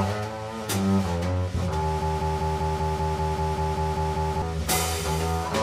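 There's a broken-record loop from 2.02 s to 4.42 s: a short slice of the audio, about 195 ms long, plays back to back twelve times over, exactly the same each pass, so you get that stuttering, stuck-needle effect for over two seconds. Whatever should have played in that stretch never comes through. The likely cause is the player, encoder or stream stalling and resending the last fragment it had buffered until things got moving again.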